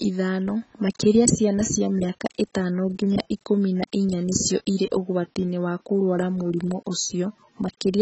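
AAC compression damage runs through the whole recording: the speech has nothing above 8 kHz, sounding dull and smeared, with a warbling, fizzy texture on sustained sounds and sibilants. That heavy damage points to a low AAC-LC bitrate, likely around 16 kbps.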